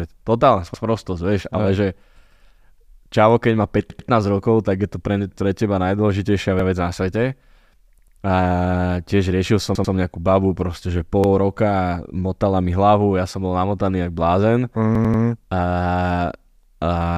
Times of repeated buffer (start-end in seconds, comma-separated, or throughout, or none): 0.74-0.84, 2.32-2.41, 3.90-4.09, 6.59-6.69, 7.99-8.17, 9.75-9.94, 11.24-11.33, 14.95-15.23